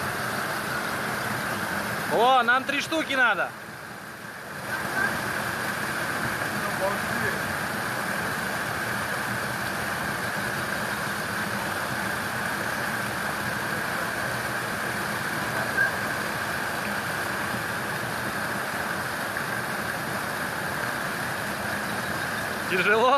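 No technical faults are audible anywhere in the recording.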